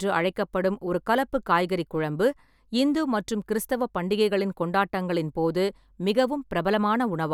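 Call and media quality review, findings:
No findings in this call and media quality review.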